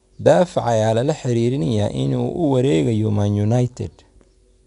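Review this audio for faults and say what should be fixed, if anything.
4-bit ADPCM compression affects the speech for its whole length. Each sample is coded as a coarse 4-bit step from a predicted value, so a gritty hiss rides on every loud stretch and rises and falls with it. Sharp onsets sound roughened because the step size lags behind sudden jumps. The spectrogram shows a noise floor that swells under voiced energy and nothing above 10.6 kHz, which fits a rate near 88 kbps. The waveform shows staircase steps lagging behind the signal at attacks. To prevent it, keep a lossless or higher-quality master and avoid coding through low-bit ADPCM.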